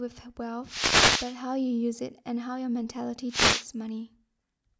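Wireless microphone noise hits occur from 0.65 to 1.37 s and again from 3.29 to 3.66 s, each heard as a brief swish of static over the speech. The radio link of an analogue FM microphone weakens when reflected copies of the signal cancel the direct one. The receiver's own noise then rises above the faded carrier and partly masks the talker. The first dropout lasts about 0.7 s and the second about 0.4 s.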